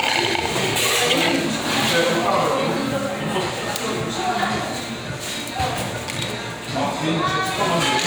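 No technical faults can be heard anywhere in this recording of sounds. There is nothing in it that needs a time stamp or a fix.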